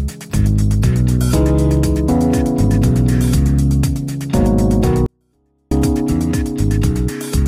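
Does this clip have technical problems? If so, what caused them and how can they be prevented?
Yes. From 5.06 to 5.71 s the sound drops by about 48 dB all at once and becomes almost inaudible, though it stays clean, with no added distortion or noise. That is a 24-bit alignment error, causing the sound to be too quiet. Samples held in the low 24 bits of a 32-bit word were read as full 32-bit integers, so every value sits 256 times too low. On a waveform the envelope collapses to a near-flat line for those 0.65 s. On a spectrogram the whole band fades uniformly, keeping its shape. Prevention means declaring the container's bit depth and alignment explicitly and checking that reader and writer agree on it.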